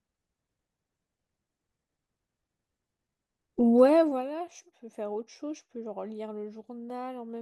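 From 3.80 to 4.33 s, zipper noise: a level drop of about 20 dB is applied in roughly 70 unsmoothed steps per second, producing audible ticking.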